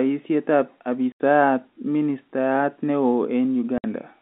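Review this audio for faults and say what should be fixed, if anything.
The speech has packet loss filled with silence: hard gaps at 1.12 to 1.20 s (80 ms) and 3.78 to 3.84 s (60 ms). The receiver inserted pure silence for missing audio, so each hole starts and ends with a hard edge. Both lengths are multiples of 20 ms, which fits 20 ms packets through the G.711 telephone path. Concealment would have bridged the gaps with stretched or repeated sound, and a gate would have faded in and out instead of cutting sharply. Enabling packet loss concealment and a larger jitter buffer would prevent it.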